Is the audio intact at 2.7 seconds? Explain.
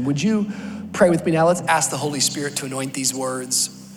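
No. Pre-emphasis left on affects the audio from 1.67 s to the end. The treble was boosted without the matching cut, a tilt that fits a J.17 curve. At 10 kHz it sits about 11 dB above 1 kHz, so the sound is thin, bright and sibilant.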